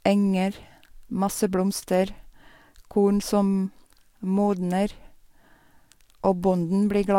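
Listening to this speech recording, nothing stood out as a technical problem.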